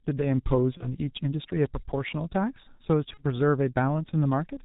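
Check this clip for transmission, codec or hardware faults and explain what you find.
Two faults are present: heavy G.723.1 codec damage across the whole speech clip, and two short dropouts repaired by packet loss concealment.

G.723.1 codec, throughout: the speech is muffled and hoarse, with smeared consonants and nothing above 4 kHz. The damage is consistent with a low rate of about 6.3 kbit/s. Its 30 ms frames and slow spectral updates blur transitions. This damage is steady everywhere, unlike the brief loss events.

VoIP packet loss concealed by the speech codec, at 0.77 to 0.89 s and 3.14 to 3.20 s: each event points to a single lost 30 ms frame. The decoder filled the gap by repeating its last pitch and filter at falling gain, giving a buzzy or noisy stretch that fades. Because the next frames build on that guess, the weakness persists briefly. Unlike a clean dropout, the gap is not left silent.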